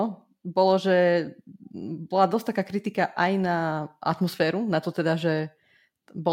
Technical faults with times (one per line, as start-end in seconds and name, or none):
none